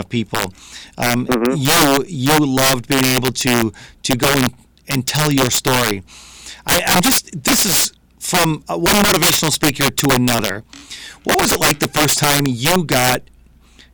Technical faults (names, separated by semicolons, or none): integer overflow